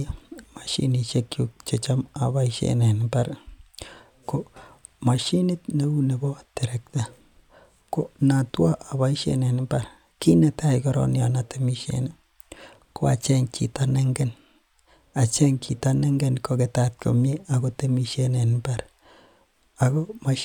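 No technical faults can be heard anywhere in this speech recording; the signal stays steady and intact throughout.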